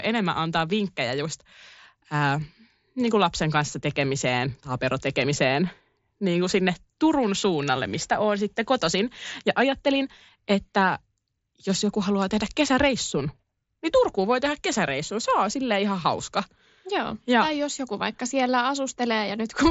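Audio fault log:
No faults to log.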